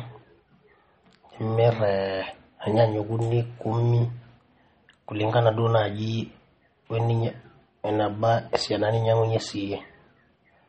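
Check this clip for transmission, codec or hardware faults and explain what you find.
One codec fault runs through the whole recording: MP3 compression damage, plainly audible from start to end. The speech has nothing above 8.4 kHz, a hard treble cutoff that fits an MP3 encoder likely starved of bits, at a rate that points to roughly 32 kbps. With so few bits, the encoder discards the top band and zeroes weak frequency lines that then flicker between frames. The result is a dull, watery, swirling texture, with metallic chirping on s sounds and softened consonant attacks.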